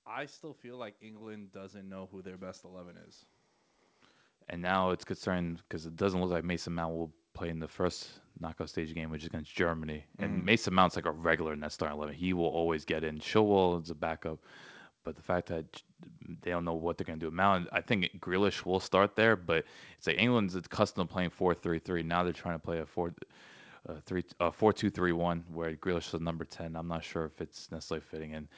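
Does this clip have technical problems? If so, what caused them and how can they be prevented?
Yes. Automatic gain rising runs from 0.62 s to 13.31 s: the gain control judged the input too quiet and kept pushing its gain up, by about 17 dB in total. What separates this from a talker simply leaning toward the microphone is that the background noise swells right along with the speech, and the climb is slow and steady over nearly thirteen seconds. The lack of content above 8 kHz fits a G.722 call path. To prevent it, set a proper input level before the call or disable automatic gain on the sending device.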